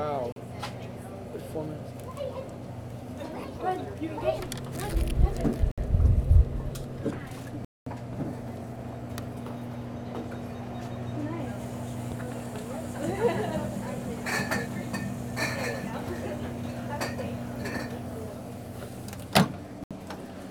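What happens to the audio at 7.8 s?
The audio most likely hit a Bluetooth stall: the wireless link was likely held up long enough for the headphones' buffer to empty, pausing playback until delayed packets arrived. From 7.65 to 7.87 s the sound drops to silence for about 218 ms, then resumes.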